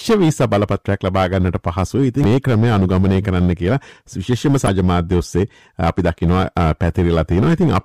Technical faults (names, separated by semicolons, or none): hard clipping; damaged data in a compressed stream